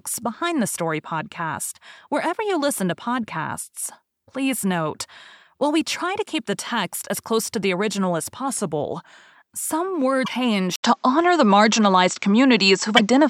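At 1.24 to 1.27 s a short blip breaks the speech. That is damaged data in a compressed stream: the decoder loses frame sync and skips ahead. Just after "to the original as", from 8.50 to 9.33 s, speech slows by 5.6% and drops about a semitone (101 cents), then snaps back. A drift correction step is the likely cause. The same decoding blip returns at 10.23 to 10.29 s. At 10.76 s, after an 80 ms silence, the input was likely switched to a poorer device. The sound turns dull, with nothing above 8 kHz, a level shift of roughly 5 dB and new background noise around 45 dB down. A final blip hits at 12.95 to 13.00 s.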